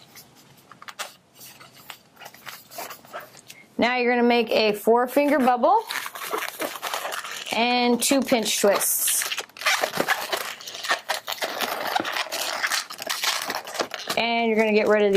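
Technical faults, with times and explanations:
No technical faults, with times and explanations, can be given, as none are present.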